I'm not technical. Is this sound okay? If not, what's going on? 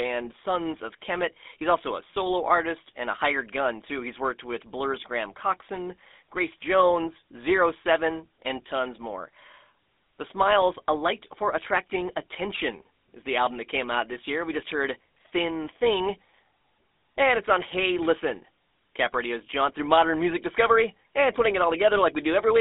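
No. The whole recording has been through the GSM full-rate codec, the compression used by early digital mobile phones. It rebuilds the voice from a simplified model driven by evenly spaced pulses, which gives the speech a plainly audible buzzy, gravelly roughness from start to finish. It also keeps only a narrow band, roughly 250 Hz to 3.6 kHz, with nothing above about 3.8 kHz, so the voice sounds thin, boxy and phone-like throughout.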